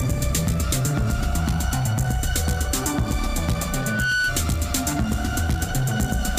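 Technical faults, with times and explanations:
3.69–4.41 s, loudspeaker feedback squeal: a 1.5 kHz tone swells over roughly 0.4 s to about the level of the sound, as microphone-to-loudspeaker loop gain exceeds unity there.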